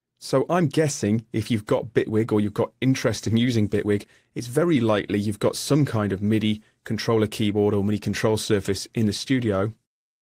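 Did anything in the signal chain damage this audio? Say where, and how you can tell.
Yes. Clock drift between sender and receiver: the sender's clock runs roughly 4 percent fast, so the receiver's jitter buffer keeps overfilling throughout. On a waveform, spacing between events looks subtly uneven.

Repeated timing corrections, from 0.15 to 10.17 s at 104 percent speed: the buffer trims short pieces at uneven intervals, showing as small seams in the spectrogram.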